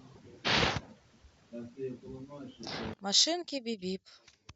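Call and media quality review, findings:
One channel inverted, 2.94 s to end (4.55 s). Speech level in the mono sum drops by about 24 dB and leaves only a faint residue. Likely cause: polarity reversal on one stereo leg, probable component the capture or mixing stage. The shared centre content cancels when the channels are summed, so only the small inter-channel difference survives. Check per-channel polarity before downmix.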